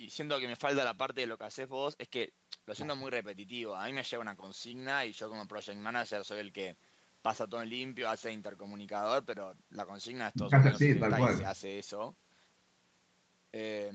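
No technical faults are audible.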